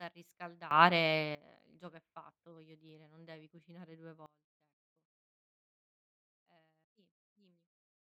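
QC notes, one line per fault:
0.71–1.35 s, sudden gain jump: sound and noise floor leap up by about 18 dB together, then fall back just before "il gioco è fatto". The likely cause is an unramped gain step. The waveform shows a hard-edged block of taller peaks, and the spectrogram shows a uniformly brighter band.
4.26 s to end, sudden gain jump: everything drops by about 24 dB in one step and stays down. The likely cause is a gain change applied without a ramp. The waveform envelope shows a vertical cliff, and the spectrogram dims evenly across all frequencies.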